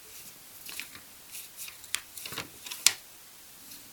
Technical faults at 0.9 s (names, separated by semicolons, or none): low bit depth with dither